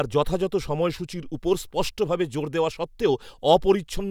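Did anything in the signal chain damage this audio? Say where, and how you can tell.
No, nothing in the signal chain audibly damaged this speech recording; the signal holds steady and continuous with no stage leaving any trace on it.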